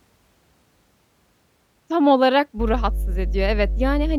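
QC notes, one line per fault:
2.57–4.18 s, mains hum: from 2.57 s to the end, a steady low tone at 50 Hz sits under the speech, fairly loud, nearly as strong as the speech itself. A ground loop or nearby transformer is leaking the power-line frequency into the signal path, so the tone holds constant regardless of the speech. On a spectrogram it shows as an unbroken horizontal line at 50 Hz with fainter lines at its low harmonics; the waveform carries a fixed low-frequency ripple even between phrases.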